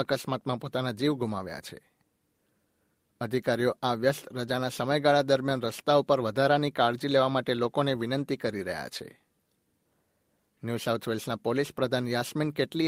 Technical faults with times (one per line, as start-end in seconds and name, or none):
none